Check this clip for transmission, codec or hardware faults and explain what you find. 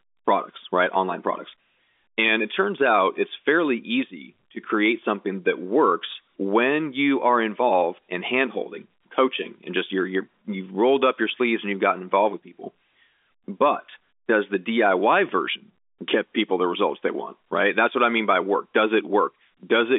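No faults found.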